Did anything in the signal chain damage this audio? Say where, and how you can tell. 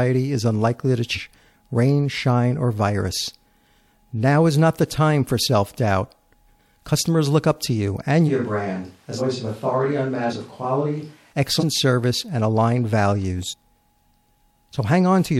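Yes. The speech jumps forward five times, each at a short join lasting about 40 ms: at 1.14 to 1.19 s, between "is unlikely to" and "rain shine or virus"; at 9.17 to 9.21 s; at 10.29 to 10.33 s; at 11.59 to 11.63 s, just before "in service and aligned"; and at 13.49 to 13.54 s. These are compressed frames skipped at the codec or storage stage. Whole frames went missing or were rejected as damaged, so each gap removes roughly 100 to 400 ms of audio. The jumps fit frames of about 46 ms.

From 8.30 s, right after "up to you and", until 11.32 s, the speech suddenly turns hollow and roomy. It loses low end, drops about 5 dB in level, and sits over room noise about 35 dB below the speech. At 11.32 s it returns to its earlier closeness just as abruptly. This is a switch to a distant microphone, likely because the close mic's feed dropped out during recording and a farther pickup covered that stretch.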